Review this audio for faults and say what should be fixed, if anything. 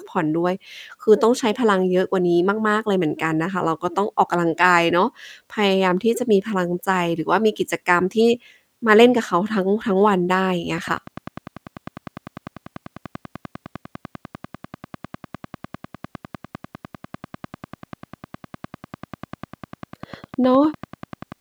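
A train of clicks runs from 10.78 s to 21.33 s: around a hundred regular pulses at 10.1 per second, peaking about 5 dB above the speech, ticking through pauses too, likely interference from nearby equipment or a faulty connection or power supply. Shielding cables, separating gear and checking interface stability would prevent it.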